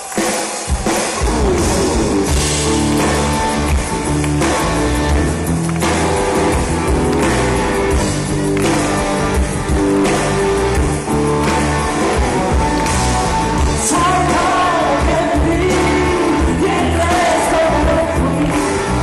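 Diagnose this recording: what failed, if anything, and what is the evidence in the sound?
Nothing in the recording stood out as a failure on careful listening.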